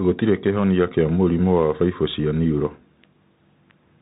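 Bluetooth CVSD headset codec damage runs through the whole speech clip. Each sample is one bit, a step up or down with adaptive step size, which fits a 64 kbps stream. The audio stops at about 3.8 kHz, sounding narrow, with plainly audible granular, scratchy coding distortion.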